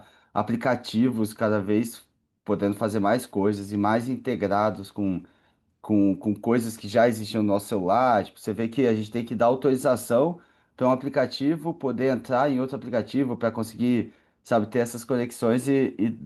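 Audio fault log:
No faults heard in the speech.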